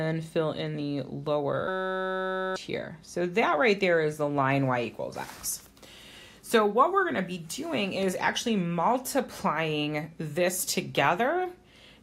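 From 1.68 to 2.56 s a system hang loop occurs: the machine stalled while the hardware kept replaying one 5.33 ms chunk, which fits a 256-sample buffer. It sounds like a steady 188 Hz buzz, with about a second of audio lost. The waveform shows one identical cycle repeating, and the spectrogram shows evenly spaced harmonic lines at multiples of 188 Hz.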